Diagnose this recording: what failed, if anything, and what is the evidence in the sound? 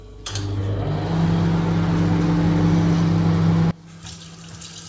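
One channel inverted, 3.71 s to 4.88 s: level drops about 21 dB as shared content cancels in mono, likely from reversed polarity in the wiring.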